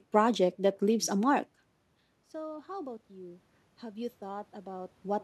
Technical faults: automatic gain rising

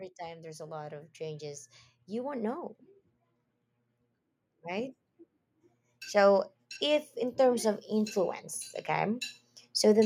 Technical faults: automatic gain rising

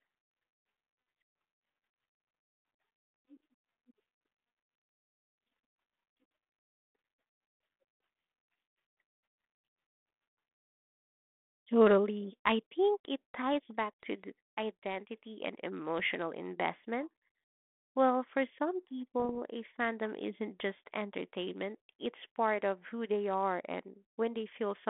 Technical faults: bit errors on an ADPCM link

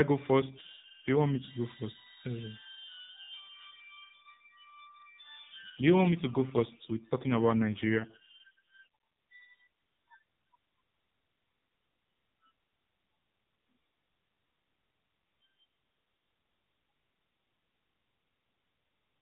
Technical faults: AMR rate drop

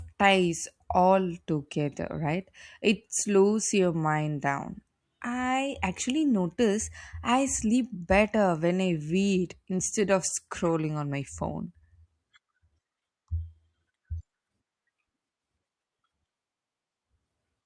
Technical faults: none

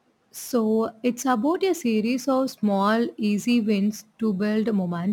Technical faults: crude rate conversion

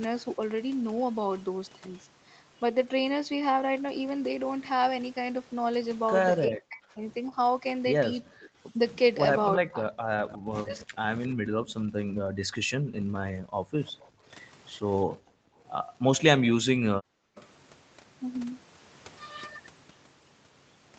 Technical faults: speech suppressed in double talk; echo leak; background gated by the echo canceller

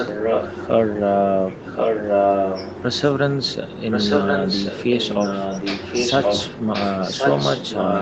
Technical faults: echo leak

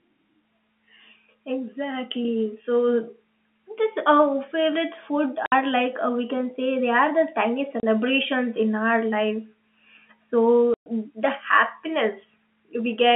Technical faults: packet loss filled with silence

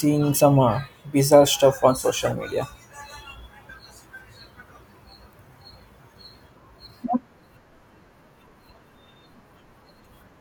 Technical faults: corrupt frame decoded

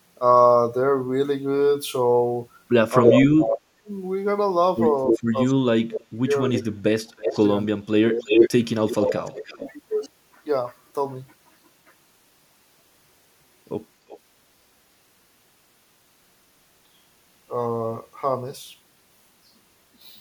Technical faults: speech suppressed in double talk; echo leak

